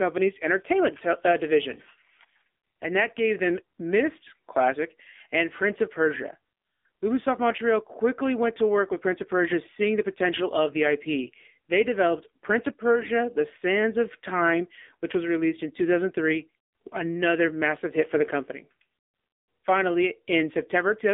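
Throughout, the AMR narrowband mobile codec limits the band to about 250 Hz to 3.6 kHz. The speech sounds buzzy and synthetic, consistent with a low 7.4 kbps mode.

From 1.72 to 1.8 s, and again from 12.96 to 13.1 s, AMR bit errors appear. A few percent of the weakly protected bits arrived flipped. The voice keeps its pitch but briefly turns hoarse and gargly.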